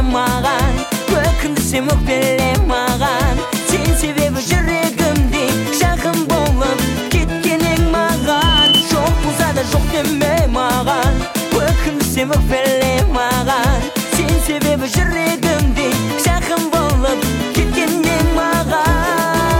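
A microphone picked up the loudspeaker it was feeding, and around 3 kHz the loop gain rose above one, producing loudspeaker feedback squeal from 8.17 s to 8.85 s. Each pass through the loop reinforced that one frequency, so a thin, piercing tone swells out of the audio in under half a second, peaks at roughly 5 dB above the rest of the sound, and stops at 8.85 s.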